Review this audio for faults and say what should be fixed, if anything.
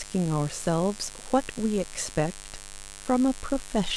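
There's mains buzz running under the speech from start to finish, a raspy 50 Hz hum with harmonics well up into the kilohertz range, sitting not far below the voice. That pattern comes from sharp switching spikes, twice per mains cycle, getting into the audio path, likely from a dimmer, a rectifier or an unshielded cable. Keep the mic and its cabling away from dimmers and power supplies, and use properly shielded, grounded leads.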